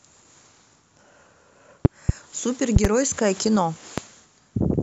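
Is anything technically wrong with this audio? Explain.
Yes. The speech carries loud pops: a double pop between 1.85 and 2.12 s, another pair from 2.76 to 2.87 s, and a single pop at 3.98–4.00 s, peaking about 20 dB above the signal (about 15 dB for the last). A sudden voltage step, likely static or a switching glitch, adds to the signal. Each is heard as a sharp thump over continuing speech. On a waveform it shows as tall spikes, and on a spectrogram as vertical broadband stripes.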